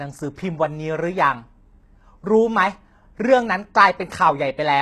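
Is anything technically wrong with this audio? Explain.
Yes. HE-AAC compression, present throughout, is the likely cause: the lower spectrum is coded sparingly and the treble rebuilt by copying lower bands upward, which fits a bitrate near 16 kbps. Content stops at 12.3 kHz, and sibilants in the speech sound gritty and metallic.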